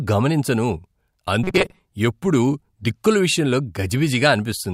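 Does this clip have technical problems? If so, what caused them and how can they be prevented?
Yes. From 1.44 to 1.79 s, just before "ఎప్పుడూ దిక్కుల విషయంలో", audio likely arrived too seldom, so about half the time was filled by looping a roughly 5 ms buffer, producing robotic sound from repeated short buffers: a rigid, metallic 188 Hz buzz. Larger jitter buffers and steadier delivery prevent this.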